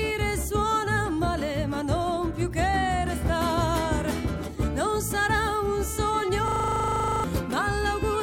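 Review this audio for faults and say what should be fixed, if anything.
The host froze while the audio hardware kept replaying its ring buffer, a system hang loop. From 6.48 to 7.24 s, one 40 ms slice of sound repeats 19 times at 25 Hz, giving a rattling buzz and losing about 0.7 s of audio. To prevent this, keep the audio thread at real-time priority and have the driver mute output when buffer refills stop.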